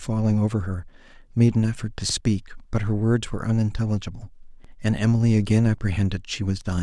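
A brief stutter jumps the speech at 2.10–2.15 s and again at 4.65–4.70 s, where a 50 ms sliver plays twice. These are overlapping chunks: the audio was handled in 2.5 s pieces, each starting slightly before the previous one ended.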